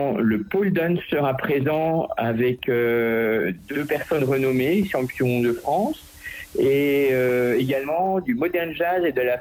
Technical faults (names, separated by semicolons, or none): digital radio blending to analogue